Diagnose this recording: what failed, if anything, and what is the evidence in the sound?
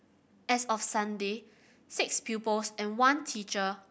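Nothing failed: no stage in the chain, from capture through conversion and storage to playback, leaves any audible evidence of a fault in the speech.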